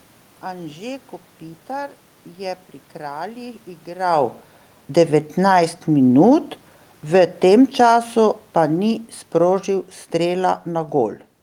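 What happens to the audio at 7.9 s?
The speech and its room background are sinking together by about 7 dB from 7.0 to 11.3 s, an automatic gain falling as the control judges the input too loud or its background noise too strong.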